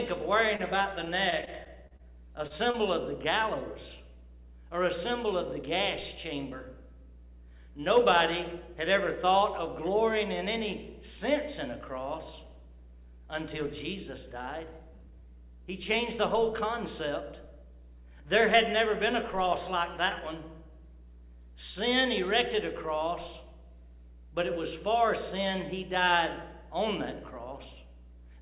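Between 0.56 and 2.77 s the audio turns choppy from repeated packet loss: about eleven short holes, none longer than 37 ms, each patched by stretching the previous sound. Unlike a single dropout, the gaps recur in quick succession. The band stops at 4 kHz, which fits a narrowband G.711 call path.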